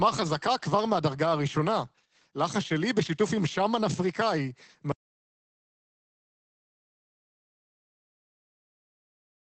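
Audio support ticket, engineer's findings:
Opus voice compression, whole clip. Content cut off above 8.5 kHz, speech muffled, hoarse, slightly robotic. Coarse linear-prediction coding of the excitation at a narrowed wideband setting, consistent with SILK mode at roughly 12 kbps. Encoder bitrate too low for clean speech.

Audio dropout to silence, 4.92 s to end of clip. Speech stops abruptly mid-flow into silence, no room tone, no recovery. Likely input lost upstream (device disconnect, failed link or mute) while the recorder kept writing silence. Remaining content unrecoverable.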